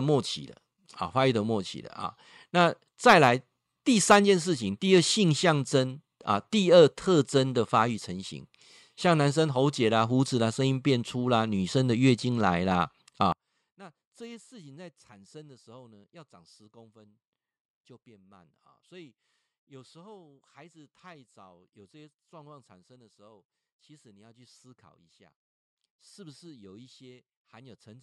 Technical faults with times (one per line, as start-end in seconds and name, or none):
13.32-28.03 one channel inverted